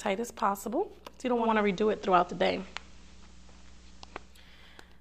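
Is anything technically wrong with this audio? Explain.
Yes. From 1.35 to 4.43 s, hiss rises and level shifts about 4 dB: digital radio blending to analogue FM, with 223 ms cross-fades.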